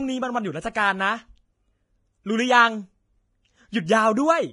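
A speech clip marked throughout by heavy Vorbis compression, likely from a low-bitrate encode around 27.5 kbps. Nothing reaches above 10.6 kHz, and the remaining treble is coarsely quantised into grainy, hiss-like noise, roughening voiced tones and smearing consonant attacks.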